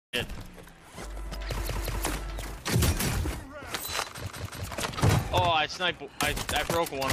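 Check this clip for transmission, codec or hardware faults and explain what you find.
Two repeated buffer faults are audible, at 1.67–2.04 s and 4.27–4.64 s. New audio arrived late, so the device replayed its last block twice more. Each block lasts about 186 ms, which fits an 8192-sample buffer. The same piece sounds three times, with hard joins, as a short stutter. Nothing seems lost afterwards.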